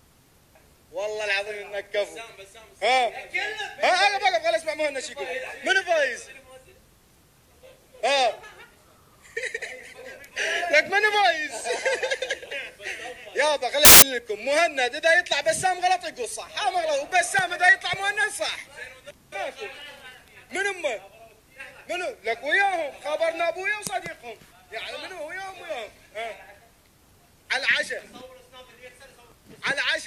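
From 13.85 to 14.02 s, samples built from the wrong bytes turn the low bits into loud, harsh broadband noise: a dense waveform block and broadband spectrogram smear.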